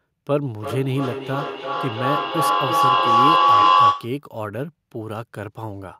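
From 0.6 s to 4.22 s a ringing tone near 1 kHz swells to about 9 dB above the speech, pulsing roughly every 300 ms. This is feedback howl: two devices in one room let the microphone-to-loudspeaker loop gain level on each pass.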